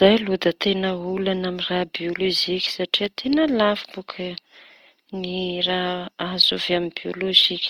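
A speech clip with a rough, grainy texture from start to finish, where tonal parts break up into noise rather than swirling, though the top end still reaches about 20.3 kHz. That's likely Opus compression in its music mode, and the damage fits a low bitrate around 24 kbps.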